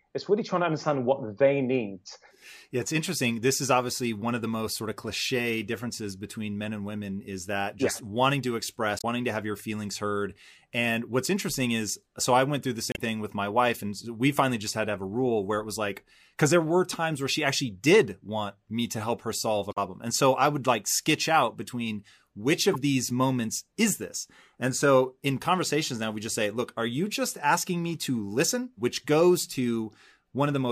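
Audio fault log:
8.98–9.04 s (after "just yeah wanting to"), 12.89–12.99 s, 19.69–19.78 s (after "to help her solve"), 22.73–22.76 s (before "these moments is this"): damaged data in a compressed stream. Corrupted bytes make the decoder misread frames and lose sync, causing a brief chirp, squawk, click or short hole in the speech while it finds the next valid frame header.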